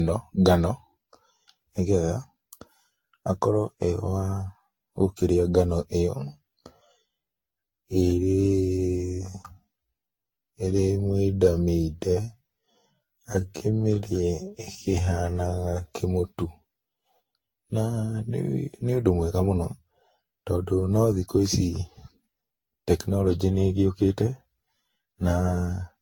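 Speech runs the whole 26 seconds with a swirly, hollow, smeared texture. Consonant attacks are blurred, the spectrum sounds pitted, and nothing is present above 19.2 kHz. This is generation loss, likely from the audio being decoded and re-encoded with a lossy codec a dozen or more times, consistent with a Vorbis chain near 64 kbit/s. Each pass re-quantises on a shifted frame grid, so the noise and spectral holes build up beyond what that bitrate alone would produce. Right after "gũkĩrĩa ngano", from 6.07 s to 16.0 s, the pace suddenly drops to about 0.59 times normal speed while the pitch stays the same. That stretch sounds drawn out. It is a time-stretched section, likely where short slices of audio are repeated to lengthen the passage without lowering its pitch.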